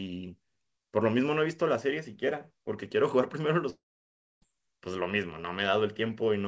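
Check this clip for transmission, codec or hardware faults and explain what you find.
One transmission fault stands out, a long network dropout, heard over a call path that carries nothing above 8 kHz, as G.722 would. From 3.70 to 4.44 s, about 0.72 s of audio never arrives, most likely because packets stopped reaching the receiver. The receiver briefly stretches the last sound into a fading buzz or hiss, then leaves about 0.6 s of silence before the speech resumes further on, with the missing stretch simply gone. Unlike a brief packet-loss glitch, the concealment gives up and falls silent. Unlike a clean hardware mute, the gap opens with that decaying synthetic tail.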